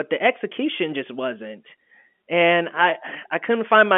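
Nothing technically wrong turns up in this speech clip, which sounds like a regular phone call carried over G.711 telephone coding, with the usual line band running from 200 Hz to 3.4 kHz.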